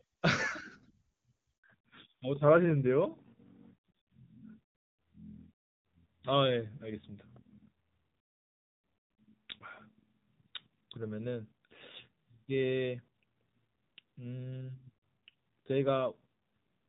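At 1.58 s there's a handover gap: the call hops networks, no frames arrive, and the sound cuts out for 60 ms until the new link comes up. From 1.64 s to the end you get fallback to narrowband, with the wideband HD Voice path, which had sounded clean, dropping to a narrowband codec. Nothing above 4 kHz survives, so the speech turns duller and rougher, which fits a low-rate AMR-NB mode.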